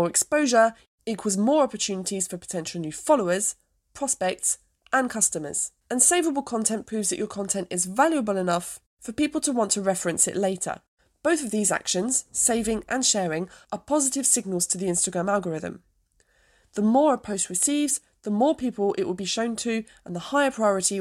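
No technical faults are audible in this speech recording.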